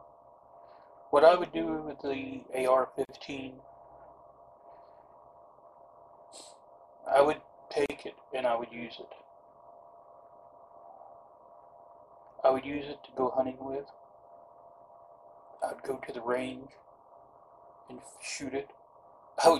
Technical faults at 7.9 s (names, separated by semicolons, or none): gap at a join of encoded pieces